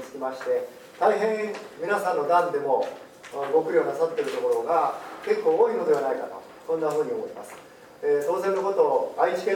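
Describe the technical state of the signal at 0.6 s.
Nothing is wrong with the signal at 0.6 s; the audio is intact at that point.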